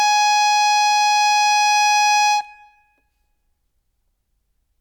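No technical faults anywhere in this music clip.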